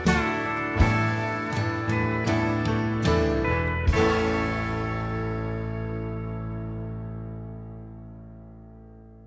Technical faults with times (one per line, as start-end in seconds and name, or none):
none